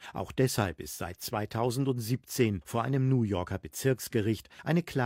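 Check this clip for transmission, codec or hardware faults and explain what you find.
Listening through the speech, nothing points to a transmission, codec or hardware problem; the signal stays continuous and steady throughout.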